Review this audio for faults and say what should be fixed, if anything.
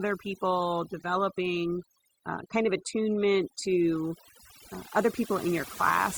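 Overdone noise removal runs through the whole speech clip. The noise reduction was set far too aggressively: any frequency band close to its noise estimate is pulled right down or switched off, and the quieter parts of the voice fall below that line and vanish with the noise. The gaps are left as near silence scattered with twinkling specks. To prevent it, reduce the noise reduction strength so the voice's quiet detail stays above the threshold.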